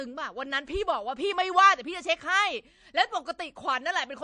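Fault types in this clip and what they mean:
MP3 compression: watery, swirly speech with nothing above 9.8 kHz, likely low-bitrate MP3 near 48 kbps; a spectrogram shows a flat ceiling and flickering gaps.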